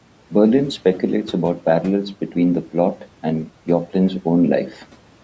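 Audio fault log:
4.70–4.84 s, speech cut by the noise suppressor: the suppressor mistook a soft bit of speech for background and ducked it by about 9 dB for roughly a tenth of a second, so it sounds swallowed.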